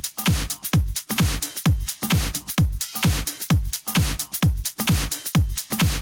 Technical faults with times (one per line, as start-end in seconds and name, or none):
0.00-6.02 gain pumping